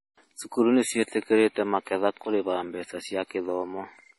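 Throughout the speech, the treble stops dead near 11.5 kHz, and the remaining detail sounds watery and swirly, with chirpy sibilants and smeared onsets. The likely cause is heavy MP3 compression at a low bitrate, around 32 kbps. A spectrogram shows a flat ceiling and flickering holes between bands.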